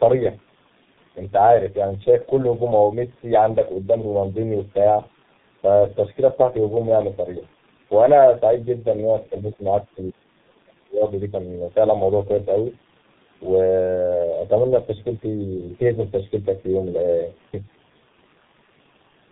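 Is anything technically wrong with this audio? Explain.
Yes, there are two faults, both present throughout. Channel delay (comb filtering): one channel trails the other by a fraction of a millisecond. Summed to mono, this cuts a first notch near 3 kHz, making the speech hollow and phasey. Tandem speech coding: the speech passed through two low-rate speech coders in a row, one fitting G.723.1. Each coder degraded the last one's output, leaving it rough, warbly and muffled, with nothing above 3.8 kHz.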